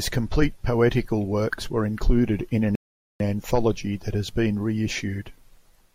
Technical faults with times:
2.75-3.20 rebuffering stall

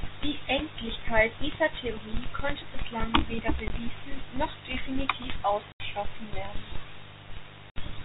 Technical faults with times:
0.00-8.05 mains buzz
3.68-3.70 packet loss filled with silence
5.72-5.80 packet loss filled with silence
7.70-7.76 packet loss filled with silence

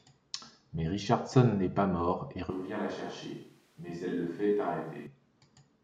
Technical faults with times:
2.50-5.06 switch to a distant microphone

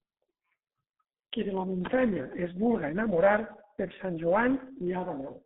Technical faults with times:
0.00-5.46 G.723.1 codec

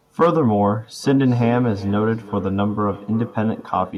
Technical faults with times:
1.04-3.98 feedback echo between two devices

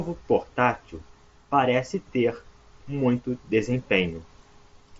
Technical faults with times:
none

